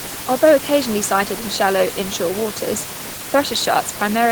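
No technical faults can be heard in the signal; the room's own background noise sits about 11 dB below the speech as part of the recording.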